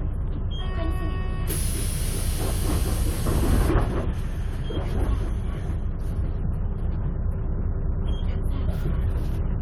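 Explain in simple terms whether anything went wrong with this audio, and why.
Nothing went wrong with this recording of sounds. Every part of it comes across as it should, with no point where something breaks or goes amiss.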